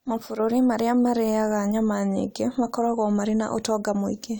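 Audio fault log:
Listening through the speech, nothing stood out as a problem at any point.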